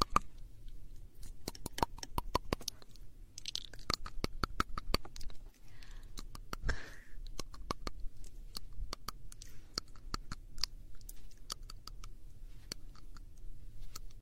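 No technical faults can be heard anywhere in the audio, and the signal holds steady throughout.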